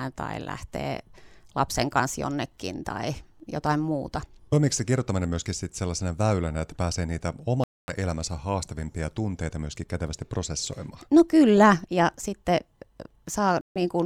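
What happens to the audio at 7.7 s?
A Bluetooth stall runs from 7.64 to 7.92 s: right after "väylänä että pääsee niitä" the speech drops to about 0.24 s of silence, then resumes at "elämänsä haastavimpia tunteita myöskin". The likely cause is interference delaying packets until the headphone buffer emptied.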